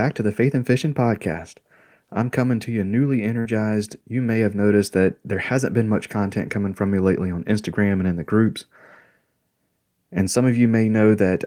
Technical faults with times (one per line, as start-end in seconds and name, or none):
3.39-3.47 burst of packet loss